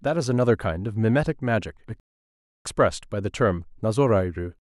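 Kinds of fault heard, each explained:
Rebuffering stall: the player exhausted its downloaded audio and halted until more data arrived. The speech drops to silence at 2.00 s and picks up at 2.65 s exactly where it left off, so nothing is missing but 0.65 s of dead time is inserted.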